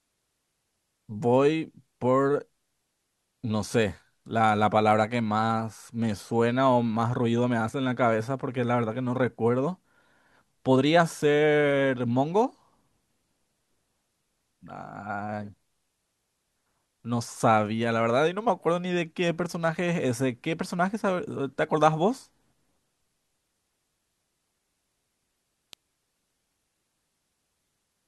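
At 25.73 s the speech is cut across by an electrical switching spike, a single sharp snap laid over the audio rather than part of it. It is most likely a nearby switch, motor or static discharge arcing briefly and being picked up by the audio line. It peaks at around -20 dBFS. On the waveform it shows as a near-vertical needle, and on a spectrogram as a thin bright line running straight up through the frequencies.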